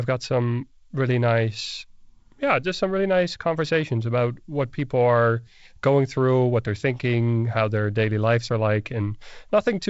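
No technical faults are audible.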